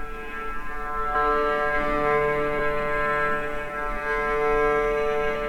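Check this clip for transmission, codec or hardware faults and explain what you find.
There's a codec fault: compressed frames skipped at 1.14 s and 2.58 s. Lost or rejected frames make the audio jump ahead about 0.2 s, then 0.4 s, consistent with roughly 23 ms frames.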